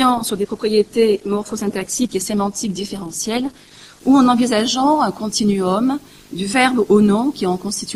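From 0 to 4.0 s, an adaptive stream starting at a low bitrate: treble stops near 12.3 kHz with stronger codec artefacts, consistent with roughly 16 kbit/s Opus, then abruptly improves.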